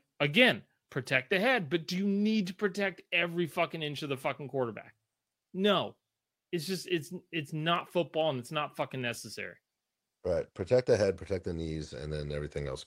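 From 0.15 s to 12.84 s the speech carries clock slip clicks: single-sample jumps about twenty times a second, heard as a faint, steady rattle under the louder passages. The likely cause is two unsynchronised clocks differing by roughly 500 ppm.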